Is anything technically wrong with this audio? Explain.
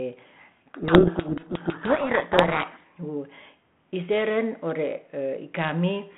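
Yes. From 0.68 to 2.85 s there is a codec payload misread: the G.726 code words arrive with their bit order reversed relative to what the decoder expects, so each sample's difference value is decoded wrongly. The speech is buried in harsh, grinding distortion. On a spectrogram, dense broadband noise fills the whole 32 kbit/s G.726 telephone band up to about 3.4 kHz and smears the speech harmonics. The waveform turns rough and noise-like until the code words line up again.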